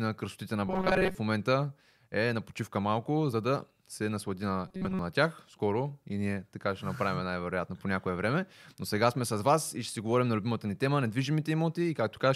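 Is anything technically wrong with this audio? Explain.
Yes. Robotic sound from repeated short buffers occurs from 0.67 to 1.15 s, after "красотите на", and from 4.68 to 4.99 s, after "да се наслади на". The speech becomes a metallic 188 Hz buzz, likely from a roughly 5.3 ms buffer looped because most new audio arrived too late.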